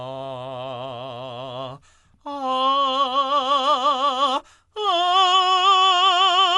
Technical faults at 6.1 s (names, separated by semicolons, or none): Dolby Digital compression